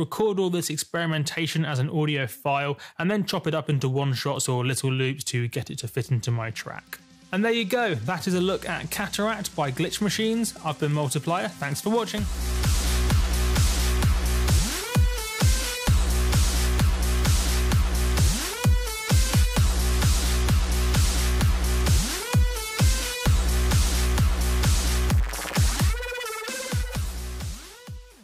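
No technical faults occur at any point in the audio.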